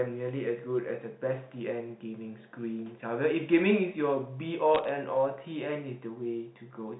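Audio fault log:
4.75–4.89 s: bit errors on a digital phone line. Flipped bits in the G.711 stream corrupt single samples, and those hitting a high bit or the sign of a loud sample are heard as sharp ticks, at a rate that fits roughly 0.2 percent of bits hit. The ticks form brief crackle over the speech, and they show as isolated one-sample spikes on the waveform and thin full-height vertical lines on a spectrogram, none reaching above 4 kHz.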